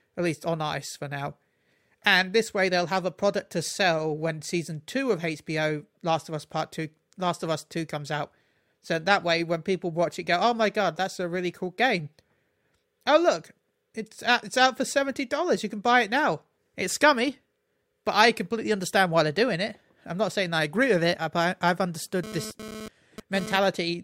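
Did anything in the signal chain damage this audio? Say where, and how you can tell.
Yes, near the very end. From 22.24 to 23.57 s, right after "with it but I've", a GSM phone buzz cuts in: a hard, raspy tone at about 217 Hz, packed with harmonics and sitting only about 12 dB under the speech. It's analogue-stage damage. A nearby 2G handset is bursting during a data transfer, which is why it comes and goes, and the wiring or preamp rectifies those radio pulses into audible buzz.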